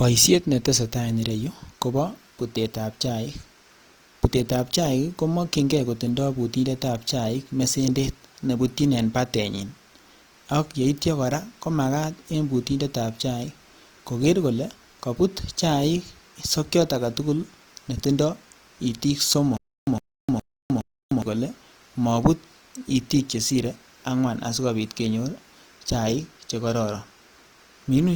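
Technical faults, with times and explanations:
Throughout: Opus compression. The encoder likely ran in its music (CELT) mode with too few bits, which fits a rate near 24 kbps, so band energies were kept but their detail was filled in. Tones turn grainy and rough while the full bandwidth, reaching about 20.2 kHz, stays open.
19.57–21.22 s: stutter with silent gaps. After "sokiot aketukul netindo itiik", the stream likely stalled and kept replaying its last 108 ms fragment before running empty. That burst returns four times, every 414 ms, with 306 ms of digital silence between, until "kolee mobut itiik chesire", and the audio in between is lost.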